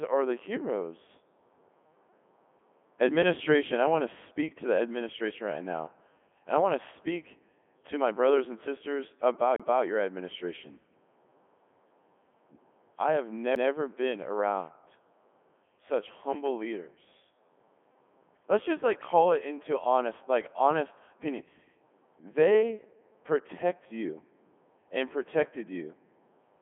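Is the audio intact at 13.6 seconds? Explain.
No. At 13.55 s there is a CD skip, between "I have" and "been around". A jolt or a disc flaw sent the laser to another turn of the spiral, so the player mutes for roughly ten milliseconds and then resumes from a different point. The result is a small tick and an abrupt jump in the sound. On the waveform this shows as a brief flat gap with a hard edge on each side. On a spectrogram it appears as a thin vertical broadband line where the harmonic pattern breaks and restarts.

The same moment also carries the Codec 2 vocoder damage that runs through the whole clip. Its sound fits the 3.2 kbit/s mode. The decoder rebuilds the voice from sine waves using only pitch, voicing, energy and a coarse spectral envelope, so the original waveform is lost. Here the damage is heavy, and the speech sounds robotic and buzzy. A spectrogram shows evenly combed, overly regular harmonics confined to roughly 250 Hz to 3.4 kHz, with nothing above 3.6 kHz.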